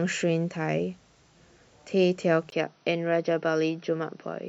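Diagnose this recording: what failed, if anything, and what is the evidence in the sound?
At 2.50 s the speech drops out for 20 ms, then loses everything above 6 kHz until the end. It sounds duller at the same level, over a faint new noise floor. A spectrogram shows the upper band vanishing after a thin vertical gap. The likely cause is an input switched to a poorer device at the driver stage, with a narrower-band microphone replacing the first.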